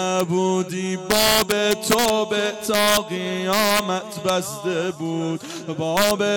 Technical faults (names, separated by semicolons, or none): integer overflow